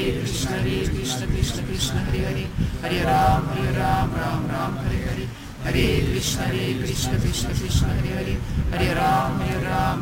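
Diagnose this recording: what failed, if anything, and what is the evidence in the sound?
The converter failed: sample clock jitter runs through the whole clip. A rough hiss rides on the sound, swelling with loud and bright passages and dropping away in quiet. The unstable clock, wandering around ten microseconds, misplaces samples on steep slopes, leaving error about 20 dB below signal.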